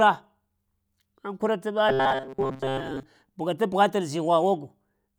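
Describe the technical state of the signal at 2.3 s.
At 2.3 s the speech has robotic sound from repeated short buffers, from 1.89 to 3.03 s. It is likely that audio arrives too seldom, so the last few milliseconds are looped for most of that span. The loop imposes a rigid 133 Hz metallic buzz that only loosely follows the words.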